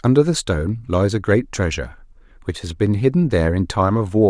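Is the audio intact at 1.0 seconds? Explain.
Yes, the speech at 1.0 seconds is intact, with no dropout, click, distortion or other fault at that moment.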